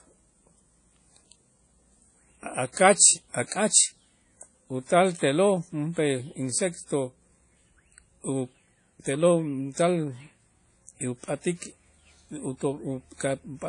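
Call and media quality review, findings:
Speech throughout: ringing, washy hiss breathing with the signal, nothing above 10.1 kHz. Likely WMA compression, block transform at low rate, fitting roughly 32 kbps. Weak lines zeroed.

Pre-echo at 2.73–2.77 s and 3.47–3.52 s. Hiss of about 43–45 ms precedes each attack, softening it. Codec block noise spreading back before the transient.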